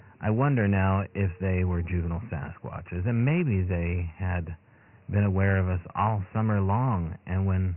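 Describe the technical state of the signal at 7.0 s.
Dialogic VOX ADPCM coding is present at 7.0 s, as it is across the whole clip. The speech has been squeezed into coarse 4-bit ADPCM steps with nothing above 3 kHz, which fits a 6,000-sample-per-second, roughly 24 kbps encoding. It sounds muffled and phone-like, with heavy gritty hiss riding on the speech.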